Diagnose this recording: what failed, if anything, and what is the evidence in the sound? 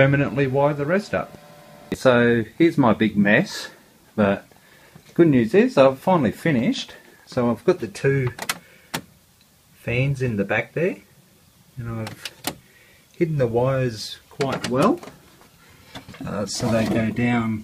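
No faults detected in this recording.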